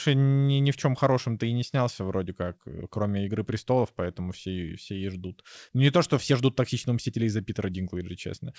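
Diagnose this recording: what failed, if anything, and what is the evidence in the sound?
The fault sits between the sending and receiving ends of the call: clock drift between sender and receiver. The sender's audio clock runs faster, by roughly 4 percent, so samples arrive more quickly than the receiver plays them out. The jitter buffer keeps filling and has to shed audio to stay in step. In this speech clip, that mismatch runs through the whole recording, beneath an otherwise band-limited call sound with nothing above 8 kHz, which fits a G.722 wideband codec.

The visible symptom is repeated timing corrections in the jitter buffer, from 0.41 s to 8.4 s. Because the sender runs fast, the receiver keeps trimming short pieces to drain the surplus. The net effect is the speech playing at about 104 percent of its natural rate. The cuts all go the same way but land at uneven intervals, small edits rather than one clear dropout.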